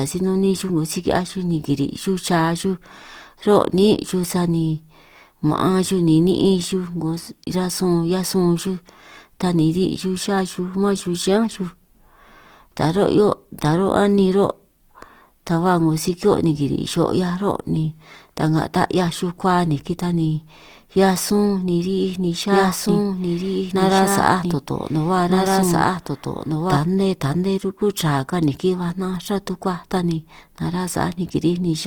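Throughout this speech clip the sound is grainy and rough, with a noisy texture where tones should be clean, though content still reaches about 20.2 kHz. That points to Opus compression, likely in its music mode at a low rate, which fits about 24 kbps. From 22.51 s to 26.77 s a second, equally loud copy of the audio runs about one and a half seconds behind the first, with no added reverberation, cutting in and out abruptly. This is a doubled audio track, likely from the same signal being picked up again through a slower path.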